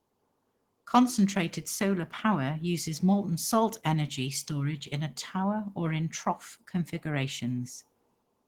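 Opus voice compression runs throughout the speech. It sounds like a low-rate hybrid setup, roughly 16 kbps: a linear-prediction coder handles the band below 8 kHz and a transform layer covers the top. The coarsely coded excitation leaves the speech plainly hoarse and slightly robotic.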